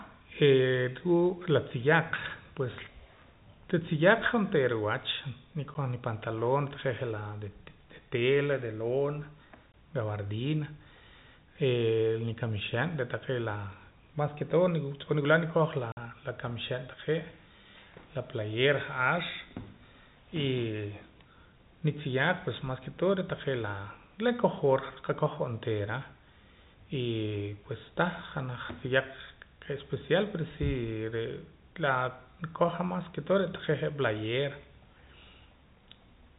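At 5.74 s the speech drops out for about 10 ms, at 9.72 s for about 20 ms, and from 15.92 to 15.97 s for about 50 ms. This is packet loss filled with silence: data never arrived, and the receiver played nothing in its place. The gap lengths step in whole multiples, which fits 10 ms packets. The holes are silence with abrupt edges, unlike concealment's smeared repeats. Beneath them, the band-limited G.711 telephone sound continues.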